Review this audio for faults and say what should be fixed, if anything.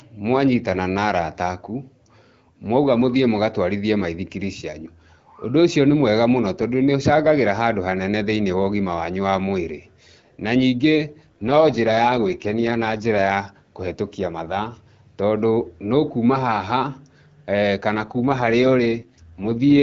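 AMR rate drops occur from 11.21 to 13.32 s, ending just before "kũhetukia mathaa tondũ", and from 17.93 s to the end. The speech turns rough and raspy with no gap and no loss of bandwidth. That fits the codec falling from 12.65 to 6.6 kbit/s on a weak radio link.

To prevent it, improve the radio link quality so the network has no need to lower the codec rate.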